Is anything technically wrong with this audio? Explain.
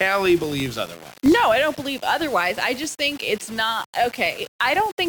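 Yes. Two faults run through the whole speech clip.

Low bit depth without dither: a grainy, crackling distortion rides on the speech and changes with it, sitting roughly 20 dB below the signal. Quiet syllable tails and pauses crumble into sputtering or drop to silence. This is likely rounding to about 5 bits with no dither, so the error tracks the waveform. Unlike steady hiss, it vanishes with the sound and grows rough exactly where the speech gets quiet.

Filter restarted on every block: a regular 50 Hz buzz of small ticks runs under the speech, which points to processing in 20 ms blocks, each one starting from silence with a fresh transient. It differs from mains hum because it gets louder with the speech and fades in quiet stretches, where true hum would stay constant. Its fixed rate also separates it from the irregular, signal-shaped grit of the quantization.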